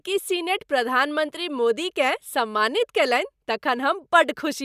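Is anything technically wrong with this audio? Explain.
No, nothing technically wrong can be heard in this speech recording. There are no dropouts, clicks, distortion or timing glitches anywhere in it.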